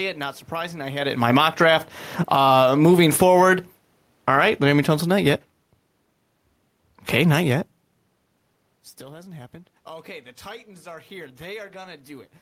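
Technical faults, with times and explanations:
1.07–1.65 s and 2.16–5.65 s, automatic gain falling: right after "surprising I had" the gain control judges the speech too loud and pulls its gain down about 10 dB, then again about 9 dB more slowly, so voice and room noise sink together.
1.55–3.73 s and 8.99–12.37 s, automatic gain rising: the control lifts gain about 4 dB, then about 3 dB as the talker moves away around 8 s and the input drops about 22 dB, so voice and background swell back up together over a second or more.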